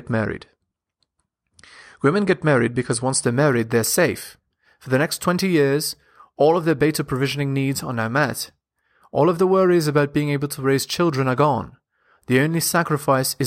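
Imaging from linear upsampling starts at 3.24 s, after "get married because once". Straight-line interpolation leaves faint mirrored images above 11 kHz, lending sibilants a thin metallic shimmer.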